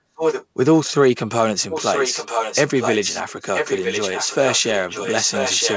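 From 0.16 to 0.46 s, then 1.7 to 3.23 s and 3.55 s to the end, there's an echo leak: a copy of the speech trailing about 0.97 s behind, first about as loud as the talker, later a bit quieter, likely a far-end speakerphone whose echo canceller let it through.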